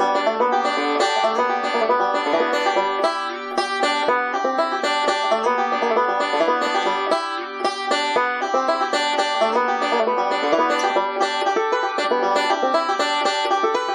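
Nothing goes wrong anywhere in this clip, so there's no fault to point to at any moment.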